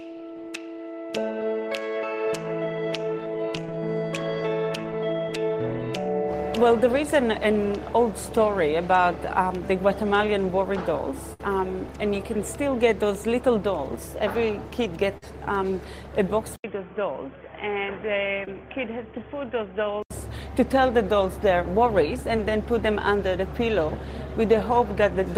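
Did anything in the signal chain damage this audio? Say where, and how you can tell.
Yes. Network stage: a burst of packet loss at 11.33 to 11.40 s sounds like a held, fading smear, then jumps ahead. Roughly 60 ms went missing and was concealed by extending the last sound.

Network stage again: short concealed packet loss gives brief smears or wobbles at 15.17, 18.45 and 22.37 s. The decoder bridged 10 to 50 ms gaps by continuing the preceding sound.

Capture stage: from 16.56 to 20.11 s the sound turns dull and boxy, with nothing above 3.4 kHz. An 80 ms silence marks the switch, the level drops by about 5 dB, and new noise sits about 30 dB below the signal. The likely cause is the input switching to a poorer device.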